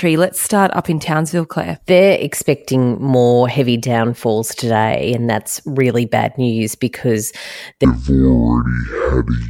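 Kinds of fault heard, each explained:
Section at the wrong speed: from 7.85 s, right after "really bad news because", the speech plays at 0.519 times its recorded speed, most likely from a clock mismatch, so it drops about ten semitones and drags; a spectrogram shows harmonics compressed downward and stretched horizontally.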